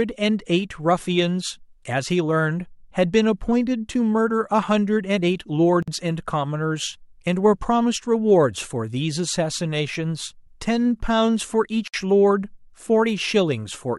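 Separately encoded pieces were joined without trimming encoder delay and end padding, creating a gap at a join of encoded pieces at 5.83–5.88 s (52 ms) and 11.88–11.94 s (60 ms), six seconds apart. Each is a sudden silence with smeared edges, then the speech resumes where it stopped.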